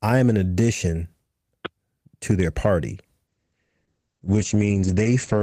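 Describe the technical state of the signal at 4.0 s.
At 4.0 s the signal is inside a call bitrate drop that begins at 3.29 s, just after "to their party", and lasts to the end. The encoder falls from 32 to 10 kbps and narrows bandwidth from 20 kHz to 8 kHz, so the speech sounds coarse and muffled.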